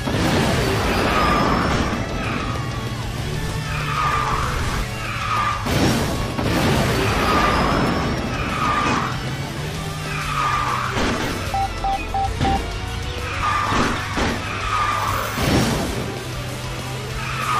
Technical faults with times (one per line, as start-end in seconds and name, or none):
13.38-13.43 compressed frames skipped